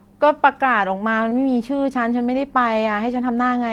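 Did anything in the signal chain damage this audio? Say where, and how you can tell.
Yes, on the network side: short concealed packet loss around 1.29 to 1.33 s. About 20 ms never arrived, and the decoder patched it by extending the previous speech, so you hear a brief smear.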